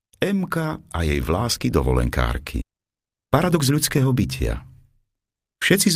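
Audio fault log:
2.61 s, skip ahead: playback jumps forward with no gap at all, so roughly a second of audio simply never plays. The material on either side is butted straight together, which is why it sounds like an abrupt splice rather than a dropout or silence. What you're hearing is a stretch that went missing in transit, or got thrown away by an overflowing jitter buffer while the later audio was already queued up behind it.
2.71 to 5.89 s, jitter buffer speed-up: right after the jump, everything runs at about 109% speed while the pitch stays put, so it comes across as rushed rather than chipmunky. The receiver was holding more audio than it wanted and kept trimming out tiny slices, a pitch period or a few at a time, over and over, shaving off around a third of a second in total to pull the delay back down.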